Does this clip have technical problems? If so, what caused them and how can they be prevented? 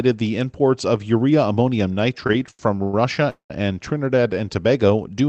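Yes. From 2.27 to 2.94 s, just after "imports of urea ammonium", the speech shows repeated stalls (stutter). The jitter buffer ran dry six times as packets arrived late, and each time the receiver stretched the last sound to cover the wait. The longest hold is about 102 ms, and together the fills add 228 ms, roughly a third of that stretch. Unlike a dropout, no speech is lost. It drags and hiccups instead. A jitter buffer that adapts its depth to the measured packet timing variation would prevent this.

At 3.30 to 3.51 s a single call audio freeze follows. The last sound is held as a fading buzz and then goes fully silent for about 110 ms, 197 ms of inserted time in all. The likely cause is one longer hold-up of packets in the network that emptied the buffer. What separates it from the stutter is one long wait that fades to silence rather than several short repeats. Speech resumes exactly where it stopped, which rules out packet loss. 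A steadier network route, or prioritising call traffic with QoS, would prevent such freezes.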